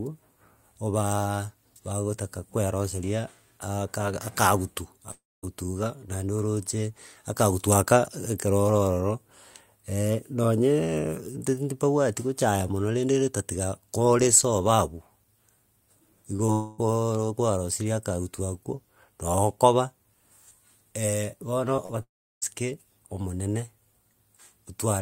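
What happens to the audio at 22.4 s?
The audio at 22.4 s is the end of a long network dropout spanning 22.03 to 22.44 s. About 400 ms of speech is missing, likely lost in transit. The receiver stretches the last sound into a fading buzz or hiss, then leaves roughly 340 ms of near-silence before speech resumes without the lost part. On a spectrogram, smeared, decaying harmonics give way to a blank band. The waveform shows a tapering tail, then a flat line.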